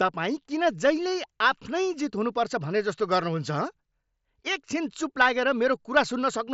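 No faults to report in this speech; it sits within the band limit of a Bluetooth mSBC headset link, with nothing above about 7.7 kHz and only the light graininess on louder sounds that this wideband codec leaves at around 61 kbps.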